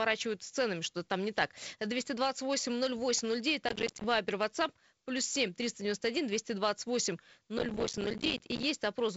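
Speech, with two bursts of processor overload crackle, from 3.68 to 4.04 s and from 7.58 to 8.63 s. Dozens of short buffers of a few milliseconds miss their deadlines, each leaving a hard-edged silent gap, so the sound tears gritty until the load eases.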